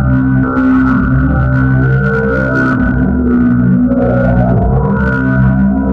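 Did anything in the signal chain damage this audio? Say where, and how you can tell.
No, nothing in the signal chain audibly damages this recording of everyday sounds. No stage, from capture through to playback, leaves a mark that a listener can point to.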